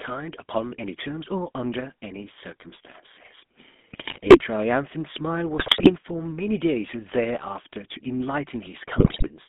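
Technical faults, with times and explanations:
Throughout: GSM full-rate codec. The speech passes through the original GSM coder, at a bitrate consistent with 13 kbps, which rebuilds the vocal tract from a sparse pulse excitation inside a narrow 200 Hz to 3.5 kHz line band, leaving a plainly audible buzzy, gravelly roughness and no upper treble.
3.92 to 4.43 s: GSM bit errors. Corrupted bits, at a rate of about 4% and hitting a run of consecutive frames, reach the decoder and scramble its filter, pitch and gain values, so the speech briefly breaks into squawks and gargling pops.
5.58 to 5.92 s: GSM bit errors. A second burst, denser at about 6% bit errors, again feeds bad parameters to the decoder, bending the spectrum and jolting the level frame by frame into harsh, garbled bursts.
8.98 to 9.29 s: GSM bit errors. The heaviest burst, near 9% bit errors, again corrupts the decoded parameters, producing squawking and gargling distortion.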